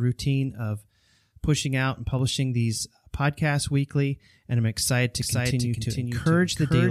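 It's a short speech clip, and right after "I'm excited to", at about 5.22 s, a doubled audio track kicks in and runs to the end. A second full-band copy trails the original by roughly 400 ms, sitting around 5 dB lower, and it appears abruptly with no decay or room colour, so it reads as a clean echo rather than reverb. That's likely a second capture path or an edit layering two out-of-step copies.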